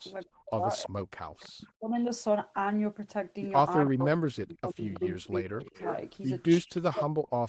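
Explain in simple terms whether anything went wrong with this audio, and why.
When both ends of the call talked at once, the echo canceller likely mistook this talker for the loudspeaker echo and turned them down too. This is speech suppressed in double talk: between 0.25 and 1.92 s, 3.9 and 5.75 s, and from 6.6 s to the end, the voice dips almost to silence in pieces.

From 3.87 to 7.05 s there is an echo leak. A loudspeaker's sound likely got back into a microphone without being fully removed. You hear a fainter copy of the voice trailing about a third of a second behind.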